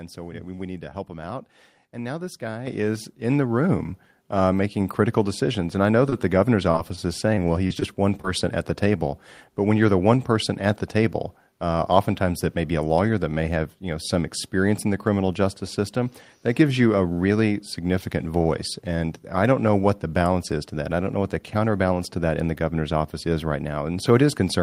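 At 2.67 s, just after "now this guy", the microphone volume steps up by about 8 dB, then again by about 3 dB at 3.69 s after "guy is in the". Voice and background noise jump together and stay louder. That is how an automatic input-gain change differs from a speaker raising their voice.

Between 6.09 and 8.25 s, after "I know" and before "at the", there are scattered short gaps. Roughly seven packets went missing, none much over 30 ms. Each was patched by extending the preceding sound, so listeners hear brief ticks and smeared hiccups rather than silent dropouts.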